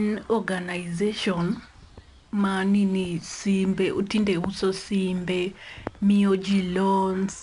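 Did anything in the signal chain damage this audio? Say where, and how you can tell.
Yes, at the codec: 4-bit ADPCM compression runs across the whole speech clip. A gritty hiss tracks every loud passage, and nothing sits above 10.6 kHz, which points to a low sample rate, with a bitrate around 89 kbps. Each sample is only a coarse 4-bit step from a prediction.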